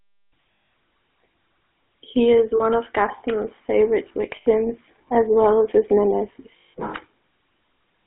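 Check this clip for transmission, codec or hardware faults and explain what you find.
Two faults are present: GSM full-rate coding across the whole clip, and four short dropouts from lost GSM frames.

GSM full-rate codec, throughout: the speech is confined to roughly 300 Hz to 3.5 kHz, consistent with a 13 kbps full-rate link. The codec rebuilds the voice from a vocal-tract model excited by sparse, regularly spaced pulses, so the voice carries a plainly audible buzzy, gravelly roughness.

Lost GSM frames, at 0.52–0.72 s (200 ms), 2.56–2.61 s (40 ms), 4.36–4.47 s (100 ms) and 6.58–6.74 s (160 ms): the decoder repeats the last good frame's parameters. Each gap becomes a held, rough metallic ring.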